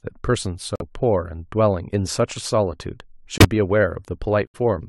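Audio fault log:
0.76–0.82 s, 3.38–3.45 s, 4.46–4.56 s: corrupt frame muted. Damaged compressed frames were rejected by the decoder and replaced with silence, so the speech drops into abrupt holes of 66 to 98 ms while the timing stays intact.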